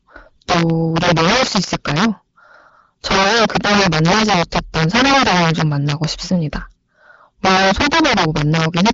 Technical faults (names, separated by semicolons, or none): integer overflow